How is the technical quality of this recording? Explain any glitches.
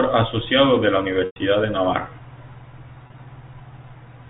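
The recording has two glitches from packet loss with pitch repetition, heard over a telephone-band G.711 path that cuts everything above 4 kHz.

At 1.26 to 1.36 s, just after "de la", about 100 ms of audio is missing. The receiver repeats the last pitch period, which produces a held, buzzy tone that fades out into silence before the speech returns.

From 3.04 to 3.18 s, about 60 ms of losses are scattered over 140 ms, and the longest run is 30 ms. Each run gives a brief, slightly held buzz. A plain dropout would leave silence or a click instead.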